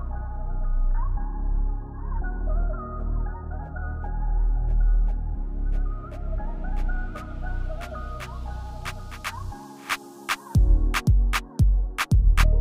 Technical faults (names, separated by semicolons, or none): none